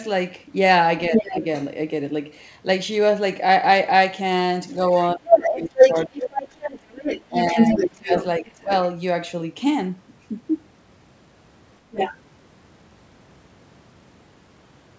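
From 1.1 to 1.44 s the talker's level dips slightly, by about 5 dB, while a second voice leaks in at roughly equal loudness between 1.14 and 1.32 s. This is speech suppressed in double talk, likely from an echo canceller ducking both voices because it could not separate them. Unlike a network dropout, the dips come while the other voice overlaps.

That voice is the other side's voice leaking through, likely residual loudspeaker echo that survived cancellation. It returns for a long stretch from 4.7 to 8.24 s, about as loud as the talker. Like the call itself, it carries nothing above 8 kHz.

During that overlap the suppression is much deeper, cutting the talker by about 25 dB from 5.15 to 6.41 s and about 20 dB from 7.29 to 8.71 s. Brief leaks follow at 8.58 to 8.74 s, barely audible at about 30 dB down, and at 11.91 to 12.17 s, only about 5 dB below the talker.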